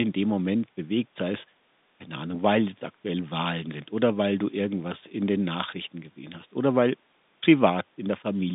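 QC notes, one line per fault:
No faults found.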